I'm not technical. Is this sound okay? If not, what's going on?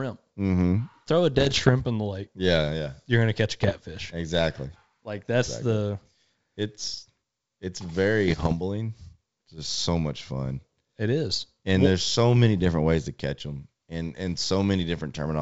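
No. There are three short patches of bit errors on an ADPCM link, at 1.33 to 1.70 s, 3.63 to 3.80 s and 8.28 to 8.54 s. You'll hear pops and rough, crackly bursts where the level jumps around. The speech is squeezed into compact digital code, and here roughly one bit in a hundred gets flipped on the way. Each bad bit throws the decoder off, so the damage smears on for a moment rather than being a single click.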